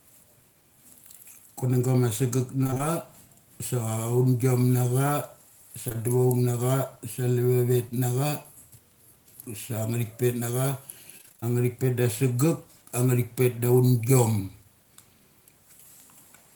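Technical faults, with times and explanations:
2.63–2.81 s and 11.18–11.52 s, repeated packet loss (robotic sound): after "ma sagek", five gaps (about 100 ms lost, longest 16 ms), and later seven gaps (140 ms, longest 26 ms). Each gap was filled by continuing the previous sound, so nearly half of each span is synthetic and sounds choppy. On a spectrogram, harmonics smear flat between vertical seams. On a waveform, cycles repeat.
5.89–6.04 s and 5.92–5.96 s, short concealed packet loss: just before "duchoung na", two overlapping 20 ms holes were filled by extending the preceding sound, which stretches that moment slightly. It is heard as a brief smear. A spectrogram shows a short frozen patch, and the waveform shows a few duplicated cycles.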